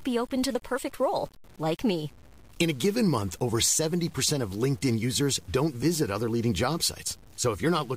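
Low bit depth without dither runs throughout the speech, most likely from truncating to about 7 bits. The rounding error tracks the signal, sitting only around 30 dB below it, so quiet syllables turn grainy and gritty, and the softest tails sputter or cut to silence.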